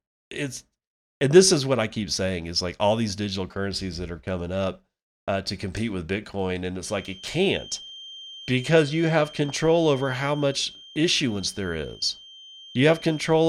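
From 6.77 s to the end of the clip, a feedback whistle sits behind the speech: a thin, steady tone at 3.2 kHz, roughly 20 dB below the speech and swelling and fading slowly in level. The likely cause is a loudspeaker-to-microphone loop held just at the edge of feedback, so that a single frequency keeps ringing around it at a low level instead of building into a runaway howl.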